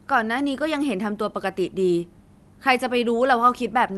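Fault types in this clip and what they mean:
No faults found: the speech arrives intact, with its top end rolled off near 12 kHz as expected from the call codec path it went through.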